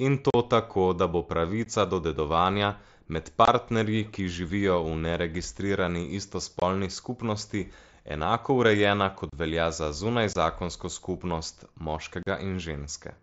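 Speech drops out in seven short, hard-edged holes from unconcealed Bluetooth headset packet loss. They fall at 0.30 to 0.34 s, at 1.65 s between "tako da bo" and "do dedovanja med", at 3.45 to 3.48 s, at 6.60 to 6.62 s after "ki živijo v neregistrirani", at 9.30 to 9.33 s before "velja za", at 10.33 to 10.36 s, and at 12.23 to 12.27 s. Each gap lasts 15 to 37.5 ms, in steps that fit voice packets of about 7.5 ms. Nothing fills the missing audio. The cut edges can click. The link carries wideband mSBC, with speech up to 8 kHz.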